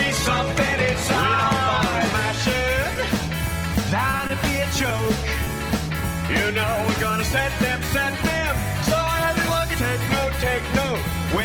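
At 2.93 to 2.97 s, a packet arrived late and the jitter buffer ran dry, causing a short stall. The receiver stretched the last sound by 20 ms and resumed where it left off, adding 20 ms of delay. Nothing is lost, but the sound hangs briefly with a faint buzz or dip.

From 4.11 to 5.48 s, packets went missing six times in quick succession, producing repeated packet loss with a robotic sound. Each gap, none longer than 20 ms, was patched by extending the preceding sound, about 8% of the span in all, leaving 60 ms of real audio gone. The passage turns choppy.

At 6.26 to 6.30 s and again at 7.86 to 7.90 s, short concealed packet loss occurs: 20 ms of audio never reached the decoder in time. The receiver synthesised a continuation of the prior sound and blended back in, so each spot is heard as a brief smear or wobble.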